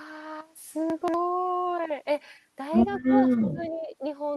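Chunks out of order, 0.9 to 1.14 s: one short block of the speech plays after the blocks that should follow it. Nothing goes missing, but the sequence is scrambled, so the passage comes out as a brief jumbled stutter with three hard joins. The displaced piece sounds about 60 ms long and surfaces roughly three blocks behind its place, which points to 60 ms chunks being written late.

Speech suppressed in double talk, 3.02 to 4.01 s: the voice sinks in level, loses its top end or breaks into fragments, with the deepest dips around 25 dB and roughly 0.7 s affected in all. The likely cause is an echo canceller that could not separate the talker from the far-end loudspeaker echo while both sides spoke, and so turned both down. The speech reaches the listener through an Opus call path with a band limit of 12 kHz.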